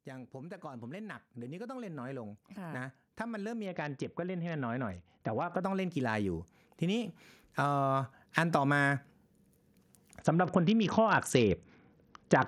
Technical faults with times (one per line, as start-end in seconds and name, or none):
0.06-9.00 automatic gain rising
3.66-5.62 Bluetooth SBC bit pool drop
10.19-12.47 Bluetooth SBC bit pool drop